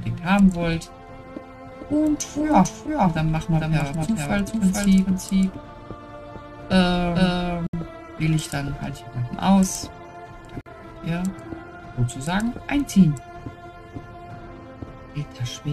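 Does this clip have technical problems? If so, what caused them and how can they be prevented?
Yes. From 1.72 to 8.35 s a full-band doubled audio track runs about half a second behind, roughly 5 dB quieter, dry and switching on and off abruptly. It likely comes from a second, slower capture path mixed in. Monitor only one input route and mute duplicate sends.

A gap at a join of encoded pieces drops 68 ms of silence at 7.67 s and 49 ms at 10.61 s, from encoder delay and end padding left untrimmed. Use gapless encoding or trim encoder delay and padding before joining.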